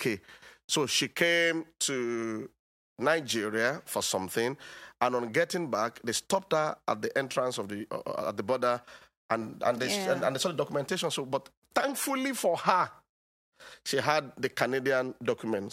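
No technical faults occur at any point in the speech, so there is nothing to describe in time order.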